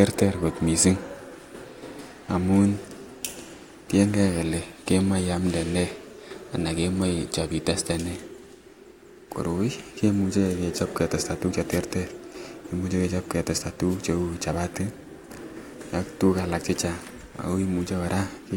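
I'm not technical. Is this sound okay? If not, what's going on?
No. Twice the voice is briefly swamped by a quick swish of static, at 11.70 to 11.78 s and again at 13.89 to 13.98 s, each under a tenth of a second. This is a wireless microphone noise hit. The microphone sends the voice to its receiver by radio, and when reflected copies of that signal cancel each other out, the signal fades for a moment. The receiver's own hiss then rises and briefly covers the speech.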